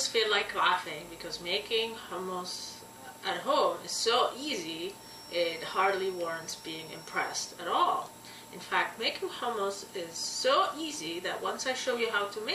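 A feedback whistle runs from 4.94 s to 7.62 s: a thin, steady tone at 5.5 kHz sitting around 20 dB below the main sound and slowly swelling and fading in level. It is likely caused by a loudspeaker-to-microphone loop held just at the edge of feedback, so that one frequency keeps ringing without building up. On a spectrogram it shows as a narrow horizontal line at 5.5 kHz across those seconds. In the waveform it is too quiet to stand out.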